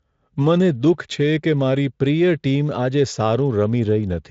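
Nothing in the recording stood out as a technical fault on listening.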